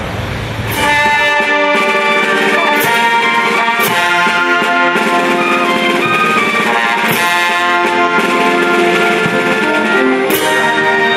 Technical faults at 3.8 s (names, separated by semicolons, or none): gain pumping